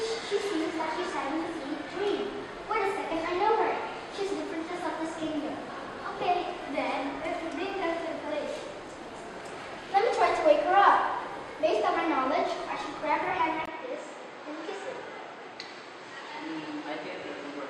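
At 13.66 s there's a 20 ms gap, then nothing above 8.5 kHz and faint new background noise. The input likely switched to a poorer device.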